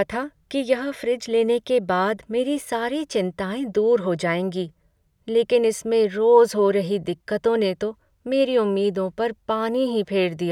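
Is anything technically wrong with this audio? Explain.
No, nothing is technically wrong with this audio.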